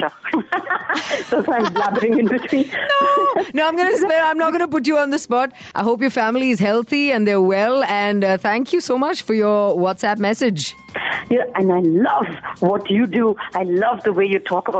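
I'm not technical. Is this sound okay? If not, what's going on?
No, not quite. What you're hearing is gain pumping, and it runs through the whole clip. The level gets pulled down a fair bit every time something loud comes in, so loud and soft parts end up closer together and everything feels squashed. The likely cause is the input level being set far too high, with an automatic limiter yanking it back down on each loud moment.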